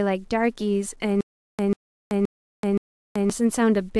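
Throughout the speech, the signal was likely reduced to a coarse word length and rounded without dither, which fits 9 bits. This low bit depth without dither leaves an error that tracks the speech, a grainy distortion roughly 45 dB below it that roughens quiet syllables and trails.

From 1.21 s to 3.30 s, the stream stalled and, likely at each retry, replayed its last 141 ms fragment before running dry. This stutter with silent gaps repeats the burst 4 times, every 522.5 ms, with 381 ms of digital silence between, and the speech in that stretch is lost.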